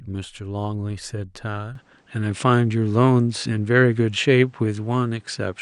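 From 1.75 s, nothing passes above 9.8 kHz. The speech dulls, gains faint background noise and shifts level by about 5 dB. Likely an input switched to a poorer device.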